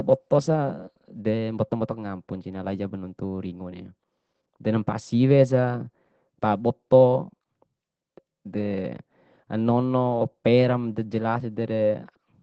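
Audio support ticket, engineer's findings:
Opus voice compression, throughout the speech. Muffled, hoarse, slightly robotic quality, plainly audible. Component: low-rate Opus encoder in SILK mode, wideband. Linear-prediction coder keeps the band to about 8 kHz, with no energy above 15.5 kHz, and quantises the excitation coarsely, which fits a bitrate near 12 kbps with 20 ms frames. Raise the bitrate to restore the upper band and a cleaner excitation.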